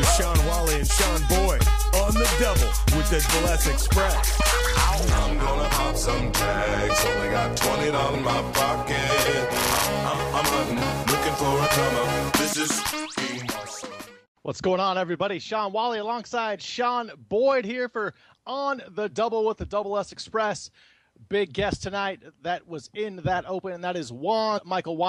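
Compressed frames are skipped at 3.28, 4.39, 8.14 to 8.16, 12.52 to 12.54, 13.82 and 24.57 to 24.59 s. Each time, roughly a tenth to a third of a second of audio is lost. The sound jumps ahead.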